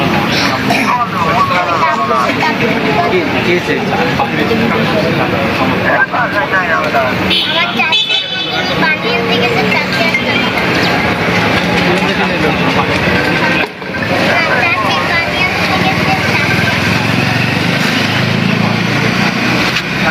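From start to finish the gain pumps, with a level swing of around 15 dB, so loud and quiet passages sit unnaturally close together and the whole recording sounds squashed. This is gain pumping. The likely cause is input gain set far too high for the microphone, with a fast limiter or compressor clamping down on each peak and releasing between them.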